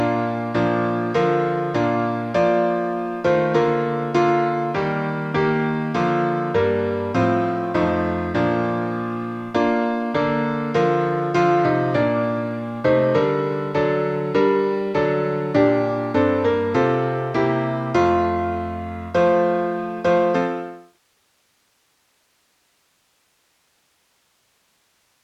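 No technical faults are audible; the level eases down in an ordinary editorial fade-out that begins around 20 s and is complete by 21.0 s, with no click or hard edge.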